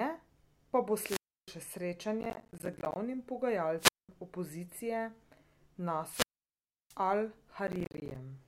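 Wireless microphone squelch dropout hits this speech recording at 0.98–1.54 s, 3.78–4.09 s and 6.04–6.97 s: hiss swells as the analogue radio link fades, the receiver's squelch mutes the output for about 0.31 s, 0.21 s and 0.68 s, then sound returns. Processor overload crackle appears at 2.21–2.96 s and 7.67–8.16 s, a gritty tearing made of dozens of tiny silent gaps, each a missed processing deadline, which fits buffers of around 10 ms.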